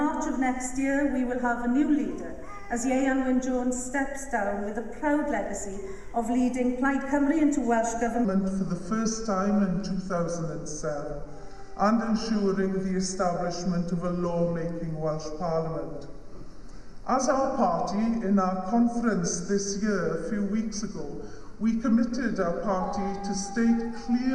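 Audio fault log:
8.25 to 24.34 s, section at the wrong speed: The audio slows to about 0.8 times its recorded speed. Pitch falls with it, roughly four semitones lower. Everything turns deeper and more drawn out. The likely cause is playback against a mismatched clock.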